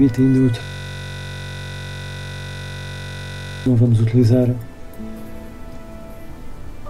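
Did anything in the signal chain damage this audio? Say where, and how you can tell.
Yes, at the driver or buffer stage. From 0.63 s to 3.66 s the audio is replaced by a system hang loop. One 21.33 ms slice repeats exactly, roughly 140 times, at 46.9 Hz. The loop is short, so it fuses into a steady buzz rather than a stutter. The host or driver stalled and stopped refilling the output. Meanwhile the hardware kept replaying the same ring-buffer contents, which fits a 1024-sample buffer.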